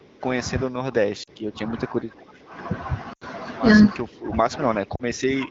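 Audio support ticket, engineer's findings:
Speech suppressed in double talk, 0.0–0.25 s, 0.65–2.54 s, 4.03 s to end. Level dips up to about 15 dB, thinned and patchy. Likely echo canceller attenuating the near talker during far-end speech.

Lost AMR speech frames at 1.23–1.29 s, 3.13–3.25 s, 4.95–5.03 s. Brief dropouts of 40, 80 and 40 ms, fitting two, four and two 20 ms frames. Decoder concealment, gain fading, rough recovery.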